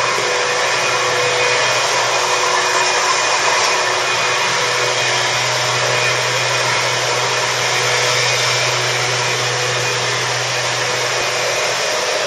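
Compressed frames skipped at 11.21 s: a few frames of about 26 ms each never play, so the audio jumps ahead roughly a tenth of a second.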